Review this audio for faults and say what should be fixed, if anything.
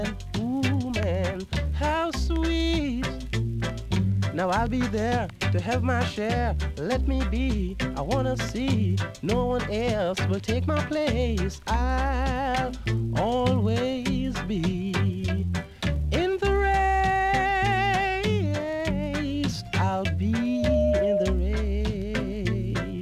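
A steady 608 Hz tone swells from 20.37 s to 21.44 s, building over a little under half a second until it sits a few dB above the rest of the sound. This is loudspeaker feedback squeal: the microphone picks up the loudspeaker it feeds, and loop gain at 608 Hz exceeds one. Prevent it by lowering gain, moving the microphone out of the loudspeaker's coverage, or notching 608 Hz.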